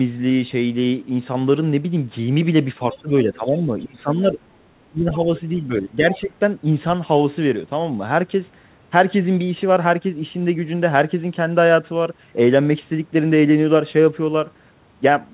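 From 2.91 to 3.02 s, the other side's voice is leaking through, likely because the echo canceller left some loudspeaker sound in the microphone signal. A brief, faint scrap of a second voice sits well below the talker, thin like the rest of the band-limited line, with nothing above 4 kHz.

Speech is suppressed in double talk from 2.93 to 4.39 s and again from 4.67 to 6.31 s, likely because the canceller could not tell the talker from the echo and turned everything down. In each span, about a second of the talker's voice dips, first moderately and then far more deeply, almost cutting out.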